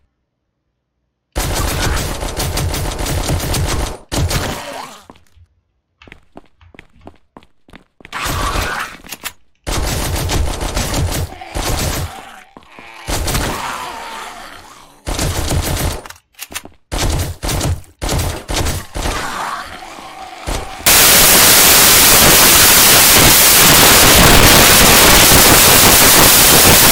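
From 20.86 s to the end of the clip at 26.92 s, the audio collapses into samples built from the wrong bytes. The reader is assembling each sample from mismatched bytes, so the rapidly changing low-order bits land in the most significant position and dominate every value. The result is loud, harsh broadband noise, close to white on loud passages.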